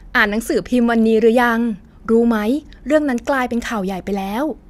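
Speech clip, and there's a short burst of DAB burbling from about 0.65 to 0.70 s: brief blips of noise in single sub-bands. Weak reception let bit errors, at a rate of roughly 0.2%, slip past error correction into the MP2 data, spoiling what sounds like a handful of frames.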